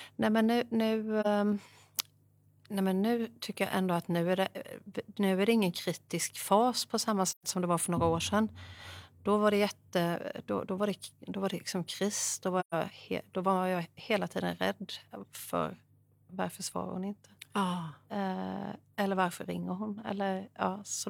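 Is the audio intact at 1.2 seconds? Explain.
No. From 1.21 to 1.27 s the speech fades into a brief dip: AAC frame loss with muting, the decoder zeroing what sounds like one missing frame.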